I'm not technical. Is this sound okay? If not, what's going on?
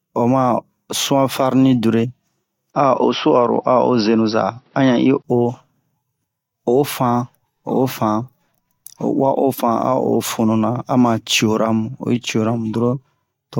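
No. From 2.72 to 5.24 s the speech turns dull and boxy after a brief gap, likely an input switched to a poorer device with nothing above 5.8 kHz.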